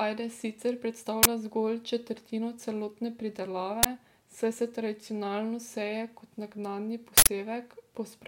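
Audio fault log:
1.23–1.25 s and 3.83–3.85 s, uninitialised buffer: twice a playback block went out before audio was written into it, so stale memory was played as samples. Each is a loud 23 ms burst of digital noise, which fits a 1024-sample buffer, after "ajde sicer" and after "zgolj četrtino celotne pridelave".
7.18–7.27 s, uninitialised buffer: a larger block was sent to the output unfilled, and its leftover memory contents played as audio. The result is a harsh 93 ms blast of digital noise, consistent with a 4096-sample buffer, right after "tradicionalno seje kot naknadni".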